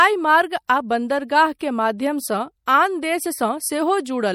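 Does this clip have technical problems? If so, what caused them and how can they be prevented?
Yes. MP3 compression damage runs through the whole speech clip and is plainly audible. It likely comes from lossy encoding that sounds like about 64 kbps. The encoder drops weak spectral lines frame by frame, which leaves a watery, swirling texture, and nothing is present above 19.8 kHz. Encoding at a higher bitrate, or keeping a lossless copy, prevents it.

Pre-echo appears at 1.59 s. Quantisation noise meant for a sharp attack spreads backwards through its transform block, so a hiss of about 17 ms leads in and the onset sounds smeared. A higher bitrate or an encoder that switches to short blocks on transients avoids it.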